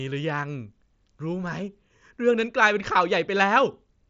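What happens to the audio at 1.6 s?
Nothing goes wrong at 1.6 s: the speech carries on intact through the Bluetooth mSBC headset link, with no dropout, click or other break at that point.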